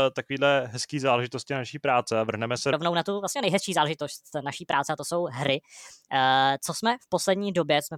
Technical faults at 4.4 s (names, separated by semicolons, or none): section at the wrong speed